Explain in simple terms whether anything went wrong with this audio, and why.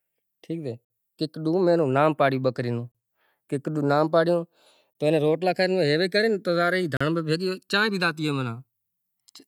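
The speech has two problems. First, there is a gap between stream segments roughly every 2 seconds, at 0.85, 2.92, 4.93 and 6.97 s. Silent holes of 54, 30, 21 and 37 ms cut in sharply. Unlike a dropout, nothing is missing. The speech simply resumes slightly later, exactly where it stopped.

Second, the channels are drifting apart. The left and right channels were recorded on devices with slightly different clocks, so one slowly lags the other, reaching about a millisecond by the end. Played through one speaker, this gives a gradual swooshing, hollow sweep, not a steady echo.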